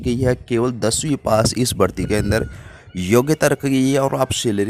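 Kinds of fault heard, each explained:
No faults can be heard in the signal, with no gaps, clipping, noise bursts or timing irregularities anywhere.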